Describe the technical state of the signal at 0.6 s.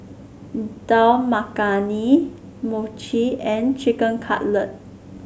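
At 0.6 s the speech signal is intact, with no audible technical fault at that moment.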